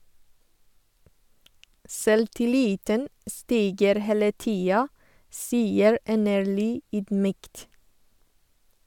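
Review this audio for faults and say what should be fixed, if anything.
Nothing here needs fixing, as no faults turn up anywhere in this speech recording.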